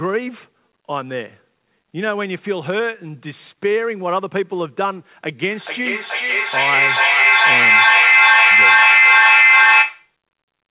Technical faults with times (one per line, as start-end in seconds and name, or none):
5.49-10.17 feedback echo between two devices